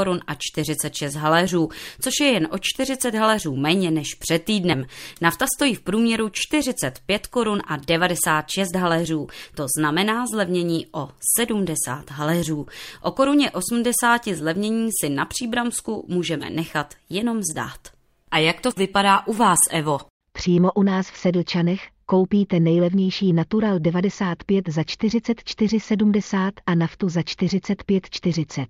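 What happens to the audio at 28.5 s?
At 28.5 s, near the end of the speech, the audio carries on intact with no dropout, glitch or other fault.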